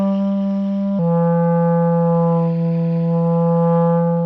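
At 0.99 s the audio drops into a section at the wrong speed. It stays that way to the end of the clip. From that point the sound plays at about 0.85 times its original rate. Pitch falls with it, by roughly three semitones. Everything turns deeper and more sluggish in the same instant. The likely cause is a player or edit running this part against the wrong clock.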